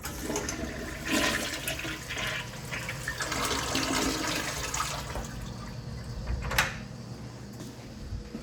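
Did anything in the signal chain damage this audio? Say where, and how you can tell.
No, nothing along the chain has left an audible mark on these sounds: the signal holds continuity throughout, with no break, distortion or coloration that would point to any stage of the path.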